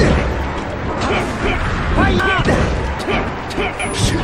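At 0.83 to 0.88 s there is damaged data in a compressed stream. The decoder hits corrupted frames, loses sync and skips forward to the next valid frame header. The result is a short glitch. On a spectrogram it appears as a brief smear of broadband, unnatural energy, and the waveform shows a discontinuity where the sound resumes slightly later. A shorter blip of the same kind occurs at 3.29 s.

At 1.40, 2.20, 3.00 and 3.80 s the sound skips, with audio missing between chunks. The spacing of 0.8 s, each skip dropping around a fifth of a second, likely comes from a recorder working in 1 s chunks and losing the tail of each while changing over. The two sides are butted together with no silence, so each skip is an abrupt jump. The waveform shows a hard splice at each point, and the spectrogram shows a vertical seam where the texture changes suddenly.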